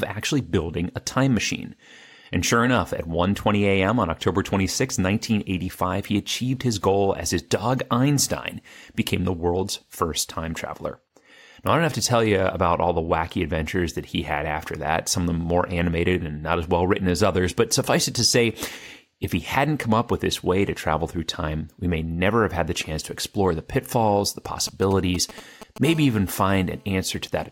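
Right after "explore the pitfalls the", at 24.45 s, a galloping dit-dit-dit of ticks and short raspy buzzes breaks into the speech and runs to 25.87 s, at roughly 15 dB under the voice. These are GSM signalling bursts: a nearby 2G phone sending short groups of radio bursts while setting up a call, which the audio circuitry rectifies into audible clicks and buzzes at the 217 Hz burst rate. From 25.87 s to 27.04 s the ticking becomes a continuous hard buzz at 217 Hz, rich in harmonics and unrelated to the speech, about 24 dB below it. This is GSM phone buzz: once the call is established, the phone transmits steadily 217 times a second, and the same rectification turns those pulses into a constant drone.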